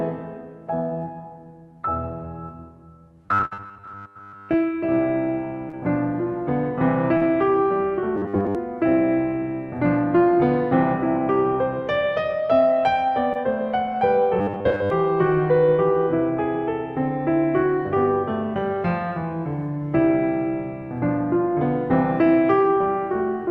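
Robotic sound from repeated short buffers runs from 3.26 to 4.55 s. The music takes on a rigid, metallic 100 Hz buzz, likely because audio arrived too seldom and roughly a 10 ms stretch was repeated while most of the real signal was skipped.

Within that stretch, a burst of packet loss from 3.45 to 3.53 s removes about 60 ms. The receiver stretches the last sound over the gap, fading it, then jumps ahead.

Short concealed packet loss follows at 5.69 to 5.75 s, 7.17 to 7.23 s and 13.33 to 13.37 s. Gaps of 20 to 40 ms are filled by continuing the previous sound and blending back, heard as brief smears or wobbles.

The robotic buzz returns from 8.16 to 8.55 s and from 14.39 to 14.90 s, again locked at 100 Hz. The Opus call path's coding, with its bandwidth ending near 12 kHz, sits underneath throughout.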